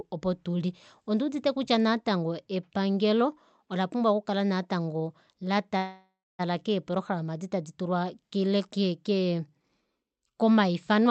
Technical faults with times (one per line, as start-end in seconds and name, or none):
5.77-6.41 call audio freeze